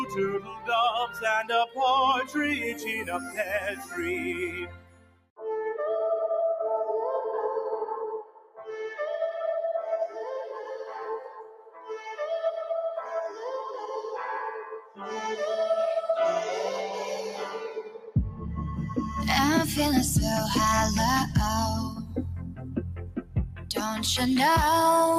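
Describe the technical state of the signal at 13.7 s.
A speech-tuned noise suppressor is running on the whole sound and treating steady and sustained material as noise, cutting it by around 10 dB at times. Held parts and decays sink while attacks get through, so the level pumps and thins throughout.

At 13.7 s the signal sits inside a stretch from 13.01 to 13.88 s where the noise suppressor cut this sound harder than its surroundings, dropping it by as much as about 7 dB over roughly half a second. The sustained part sags and its tail is shortened.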